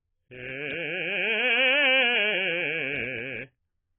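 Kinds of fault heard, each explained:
AAC compression: The music is dull and smeared throughout, with nothing above 3.8 kHz and a warbling, fizzy texture on held sounds. The likely cause is AAC-LC at around 16 kbps. Unlike a plain low-pass filter, the remaining band itself sounds holed and swirly.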